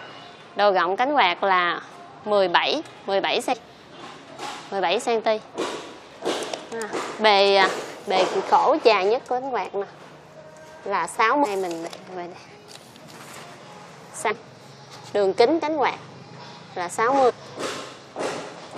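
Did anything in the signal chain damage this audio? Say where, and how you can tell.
Yes. Compressed frames were skipped at the decoder. At 3.52, 11.44, 14.29 and 17.29 s the sound jumps ahead in 23.2 ms frame steps.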